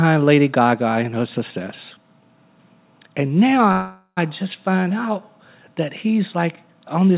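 Packets were likely held up in transit from 3.72 s, so the jitter buffer ran dry and a call audio freeze followed until 4.19 s. The last sound is stretched into a fading buzz or hiss, with a brief silence at its end, and then the speech resumes intact but about 0.45 s later. The audio stays capped at 4 kHz throughout, consistent with a G.711 call codec.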